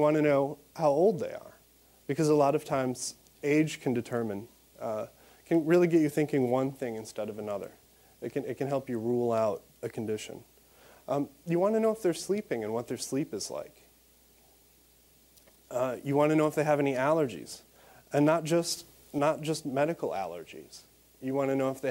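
At 18.77 s the whole signal steps up by about 4 dB with no fade. It stays raised until 19.19 s, then drops back just as abruptly. This is a sudden gain jump. The background noise rises and falls in step with the main sound, so the change sits on the entire signal rather than on one source. The instant, sample-to-sample edges most likely come from a gain setting or bit shift applied without a ramp.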